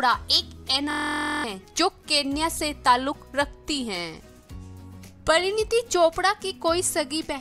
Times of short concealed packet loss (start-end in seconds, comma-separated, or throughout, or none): none